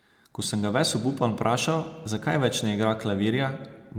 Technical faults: none

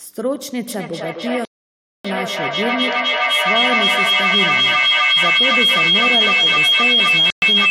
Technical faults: feedback howl; Bluetooth stall

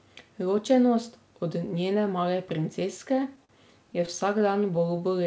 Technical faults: short stall from a late packet; repeated stalls (stutter)

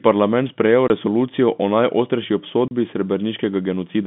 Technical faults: packet loss filled with silence

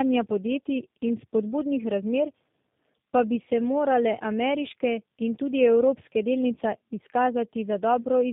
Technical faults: tandem speech coding

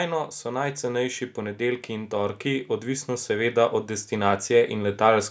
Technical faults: automatic gain rising

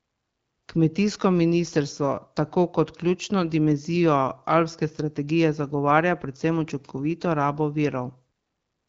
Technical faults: none

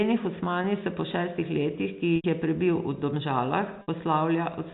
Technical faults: packet loss with pitch repetition

